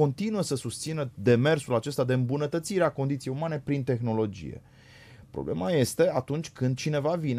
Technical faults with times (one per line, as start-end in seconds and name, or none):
none